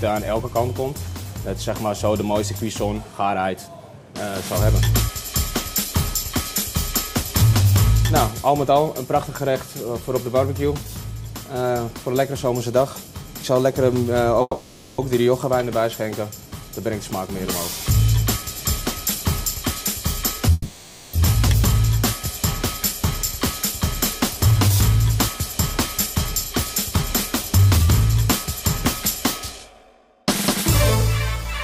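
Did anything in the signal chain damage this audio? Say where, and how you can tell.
Yes. At 14.41–15.01 s and 20.52–21.16 s the sound stalls into a fading buzz, then resumes intact: a call audio freeze, likely delayed network packets draining the jitter buffer.

From 17.21–20.49 s (3% fast) and 23.39–30.26 s (8% fast) the audio runs faster at unchanged pitch, and the second stretch sounds hurried: jitter buffer speed-up, trimming pitch periods to shed backlog.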